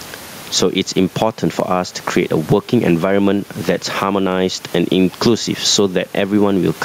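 From start to finish the sound is squashed, with loud and soft parts pulled closer in level by a gain swing of around 15 dB; room noise sits about 33 dB below the speech. This gain pumping likely comes from input gain set far too high, with a fast limiter clamping each loud peak.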